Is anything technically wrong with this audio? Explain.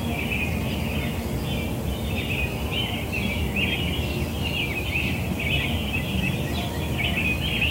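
No, nothing technically wrong can be heard in this audio. There are no faults to point to at any moment in it.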